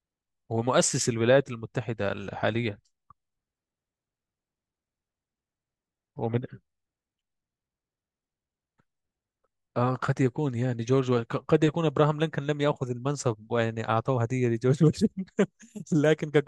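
No technical faults are audible.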